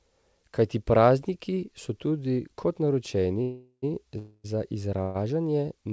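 Packets were likely held up in transit, draining the jitter buffer, producing three call audio freezes in this speech at 3.42–3.84 s, 4.18–4.46 s and 5.02–5.17 s. Each stretches the last sound into a fading buzz or hiss, ending in brief silence in the first two, then speech resumes late with nothing lost.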